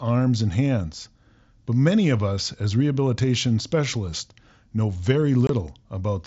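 At 5.47 s, just after "as rehabilitation specialists know", the speech drops out for about 22.5 ms. This is unconcealed Bluetooth headset packet loss over the mSBC link. A few voice packets never arrived and were replaced with silence or an idle pattern. The gap, which fits three lost packets, has abrupt edges.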